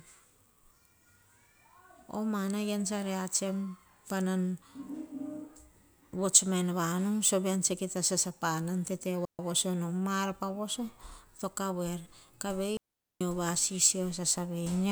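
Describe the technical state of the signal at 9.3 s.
A clean hole of near silence runs from 9.25 to 9.39 s, about 140 ms, with no noise around it: a digital wireless dropout, where the receiver muted after losing data.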